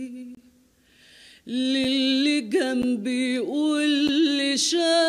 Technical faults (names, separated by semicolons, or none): block of digital silence